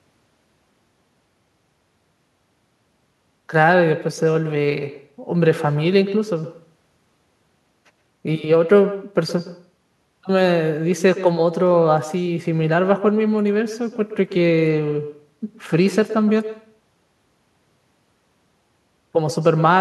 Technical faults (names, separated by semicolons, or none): echo with no canceller